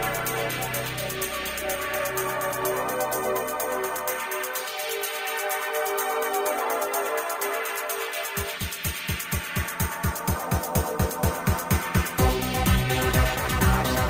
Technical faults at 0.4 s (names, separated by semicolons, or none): none